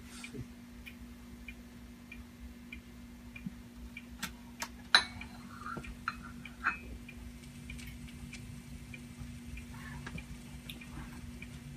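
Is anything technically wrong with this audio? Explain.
No, nothing here sounds technically wrong, and it all comes across just as it should.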